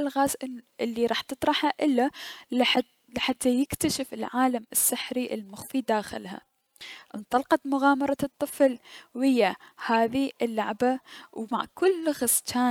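Speech with three short blips at 2.75–2.78 s just before "لحتى يكتشف العالم السحري", at 8.08 s before "الطفل ويا", and at 9.94 s before "اللعبة و مع". The first is loud and the later two fainter. Each is a corrupt frame decoded: a few damaged compressed frames were played anyway, putting energy at the wrong frequencies.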